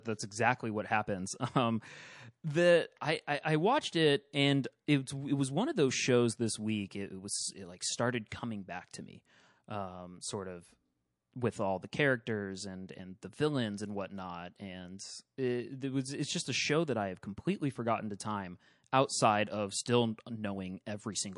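Throughout the speech, plainly audible MP3 compression makes the sound watery and swirly, likely from MP3 encoding at a low bitrate near 48 kbps. Weak frequency lines flicker on and off, showing on a spectrogram as speckled holes.

From 8.28 to 8.31 s, pre-echo puts a short hiss about 29 ms before a sharp attack, roughly 14 dB above the quiet floor. This points to long transform blocks with no switch to short ones. The waveform shows a smeared noise ramp, not a clean onset.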